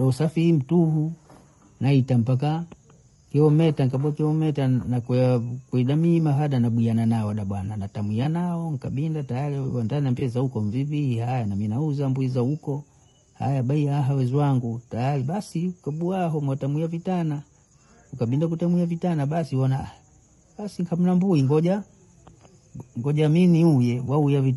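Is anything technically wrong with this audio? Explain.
Yes, there are two problems. Throughout, the speech sounds rough and grainy, with a hiss between the harmonics and a thin, somewhat synthetic top end. This is likely low-delay AAC compression (AAC-ELD). Its short frames resolve pitch harmonics poorly, and the plainly audible damage fits a bitrate around 32 kbps.

At 8.23 to 8.26 s and again at 10.19 to 10.22 s, brief smeared, noisy patches interrupt the speech. These are AAC frame loss with concealment. Each time, about 20 ms of audio went missing, and the decoder patched the gap by reusing the previous spectrum.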